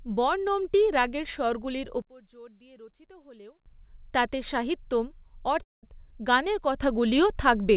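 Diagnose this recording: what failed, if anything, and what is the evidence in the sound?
Two sudden gain jumps occur in the digital gain stage, likely a gain setting or bit shift applied without a ramp. After "বর্ণমটি রাগের স্বরগুলির", at 2.02 s, the speech and its background noise drop together by about 23 dB and stay down until 3.66 s, just before "তাতে সাহিত্যম". At 6.82 s both jump up by about 6 dB and hold to the end. The noise floor moving in step with the voice marks these as gain changes rather than a talker moving or a dropout.

A long network dropout occurs right after "তাতে সাহিত্যম", from 5.63 to 5.85 s, where about 0.2 s of speech never arrives. The receiver's concealment stretches the last sound into a decaying fill, which then gives way to near silence before the speech resumes further on, with that stretch missing. Unlike the gain jumps, the background does not shift level here. 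It fades out entirely, which points to lost packets on the G.711 A-law call path, likely a network gap rather than a gain change.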